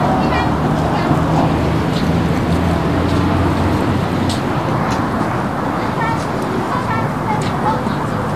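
Throughout, hissy grainy treble with nothing above 14.2 kHz, likely Vorbis compression near 35 kbps; noisy rather than MP3-like warbling, it blurs attacks plainly.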